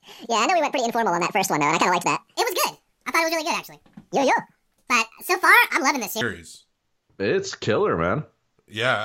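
Speech, with a section at the wrong speed from 0.00 to 6.21 s: it runs 1.83 times fast, pitch up around ten semitones, likely played against the wrong clock.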